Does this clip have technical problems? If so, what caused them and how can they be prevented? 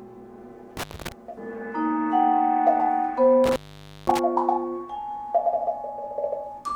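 Yes, intermittent contact cuts the sound at 0.77–1.12 s, open about 220 ms, and at 3.44–4.19 s, open about 515 ms. A loose cable or plug briefly breaks the circuit, so crackle marks each edge, unlike a clean digital dropout. Reseat or replace worn cables and connectors.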